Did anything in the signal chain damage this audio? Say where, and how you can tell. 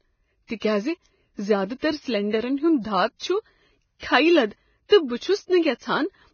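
Yes, at the codec stage, throughout the speech. Nothing survives above 6.6 kHz, and the remaining treble is hissy and grainy. That points to likely Vorbis compression at a very low rate, near 17 kbps, with fine high-frequency detail quantised into noise.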